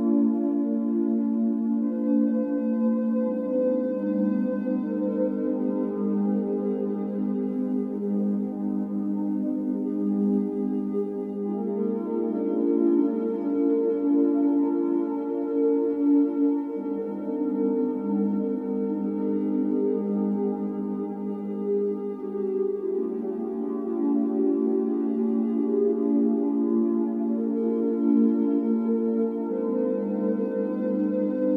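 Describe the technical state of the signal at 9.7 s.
Sample clock jitter runs from 7.48 to 11.36 s. Timing wobble of a couple of microseconds adds hiss roughly 50 dB down, rising with loud, bright sound, and shows as a haze on the spectrogram.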